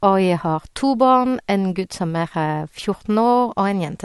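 Speech throughout shows transcoding between lossy codecs: a dulled top end, with smeared, warbling artefacts from one encoder layered over the pre-echo and swirl of another. This likely comes from an MP3 encode at around 64 kbit/s later re-encoded to AAC-LC at a similar rate, the second codec spending bits on the first codec's damage.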